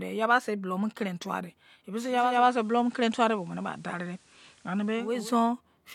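Just after "kon kenin tuwadei", at 2.07 s, the receiver loses its digital stream and cross-fades over 434 ms to the FM broadcast, returning at 5.32 s. During this digital radio blending to analogue, hiss sits roughly 35 dB down, level unchanged.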